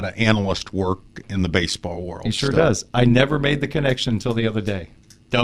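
Overlap-add ripple runs throughout this speech clip: its level swells and dips by about 11 dB around a hundred times a second, a metallic buzz with extra tones around each note. The audio was rebuilt from windowed frames whose overlapping windows fail to sum to constant gain.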